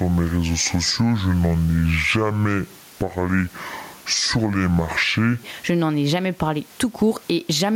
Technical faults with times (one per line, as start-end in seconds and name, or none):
0.00-7.76 gain pumping
0.00-5.43 section at the wrong speed